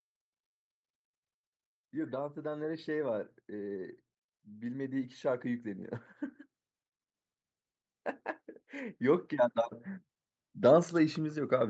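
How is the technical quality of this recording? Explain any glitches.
The main flaw is a gain swell partway through the speech. Across the whole clip, content stops at about 8 kHz, as expected from a call path.

From 2.42 to 5.96 s, automatic gain rising occurs. The gain control judged the input too quiet and raised its gain by about 10 dB over roughly three and a half seconds. Voice and background noise grow louder together, a slow swell rather than a natural change in level.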